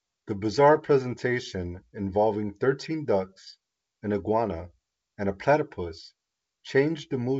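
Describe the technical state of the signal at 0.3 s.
At 0.3 s the speech is intact and carries no fault, coming through G.722 wideband telephone coding at 64 kbit/s with at most a faint trace of the coding.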